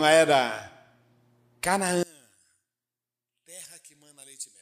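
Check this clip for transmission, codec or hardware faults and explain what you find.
From 2.03 s to the end, one channel inverted: the speech drops by about 20 dB, leaving a faint residue. Summing to mono likely cancels the shared centre, which a plain level drop wouldn't do.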